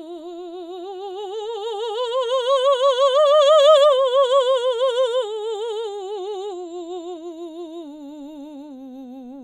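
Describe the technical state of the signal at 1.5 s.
At 1.5 s the music plays through intact, with no audible dropout, distortion, glitch or other technical fault at that point.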